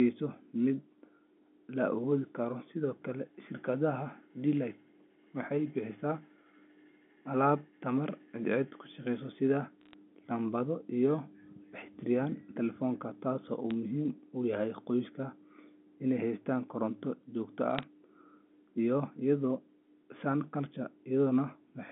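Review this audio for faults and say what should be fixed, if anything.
Bit errors on a digital phone line crackle at 9.81 to 9.94 s, 13.71 s and 17.75 to 17.83 s. Flipped bits corrupt single samples, which show as isolated waveform spikes and thin vertical spectrogram lines. A cleaner digital link or error checking on the line would prevent them.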